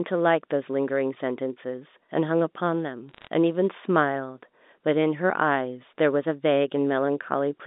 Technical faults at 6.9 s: none

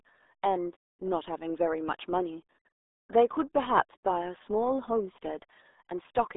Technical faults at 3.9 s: RealAudio 14.4 codec

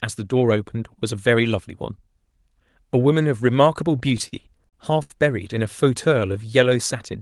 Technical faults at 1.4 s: none

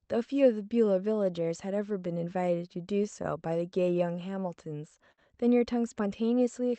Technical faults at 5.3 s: clock drift between sender and receiver; repeated timing corrections

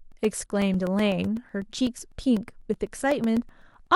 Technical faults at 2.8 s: periodic USB or driver dropouts

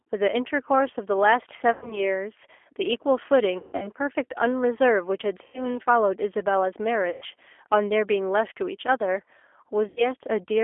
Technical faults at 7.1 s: G.729 codec; VoIP packet loss concealed by the speech codec

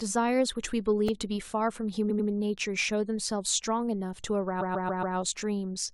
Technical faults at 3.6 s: none

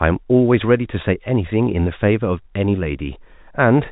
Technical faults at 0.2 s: none

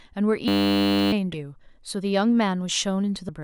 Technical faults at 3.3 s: damaged data in a compressed stream

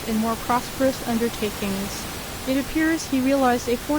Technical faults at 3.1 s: none

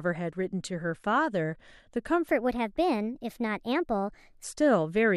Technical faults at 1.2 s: none

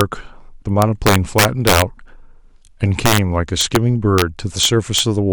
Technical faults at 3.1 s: integer overflow

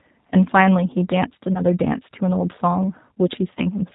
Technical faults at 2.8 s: G.729 codec

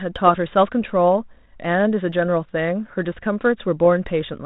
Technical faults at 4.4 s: none

